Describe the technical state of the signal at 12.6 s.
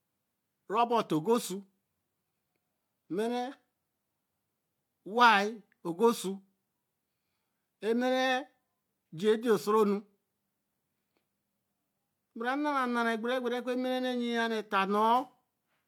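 At 12.6 s the speech signal is intact, with no fault audible at that moment.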